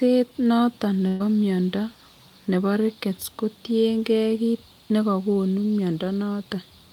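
From 1.07 to 1.22 s a burst of packet loss removes about 120 ms of speech. The receiver stretches the last sound into a fading buzz or hiss, seen as smeared, decaying bands before the speech resumes abruptly further on.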